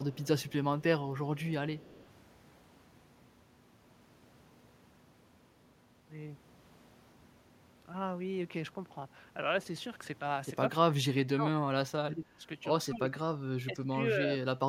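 Echo leak appears from 0.12 to 0.52 s, 1.37 to 1.43 s and 1.78 to 2.04 s. A faint copy of the speech trails it by 182 ms, roughly 25 to 30 dB down, likely because a far-end echo canceller passed loudspeaker sound back through its microphone.

Speech suppressed in double talk follows from 10.89 to 12.44 s, 12.87 to 13.44 s and 13.66 to 14.61 s. The voice sinks while the other side talks, by as much as around 25 dB, as an echo canceller likely mistook it for echo.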